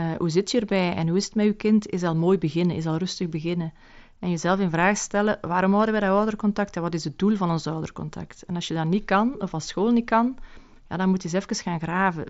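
There are no technical faults to describe in this speech clip.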